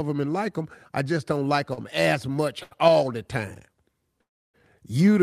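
Speech with two brief hitches where a sound is held slightly too long with a faint buzz or dip, at 1.73 to 1.79 s (40 ms) and 2.63 to 2.73 s (78 ms). These are short stalls from a late packet: the jitter buffer emptied, the receiver stretched the last sound, then resumed with nothing lost. A longer call audio freeze runs from 4.21 to 4.56 s: the sound trails into about 310 ms of silence, and 327 ms are inserted before the speech picks up where it stopped. This is likely a run of delayed packets draining the jitter buffer.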